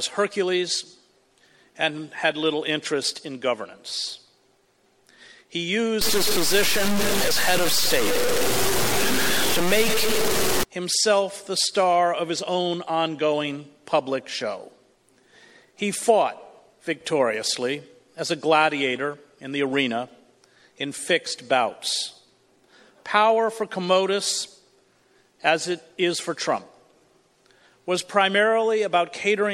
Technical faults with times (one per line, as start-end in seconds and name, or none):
6.01-10.63 low bit depth without dither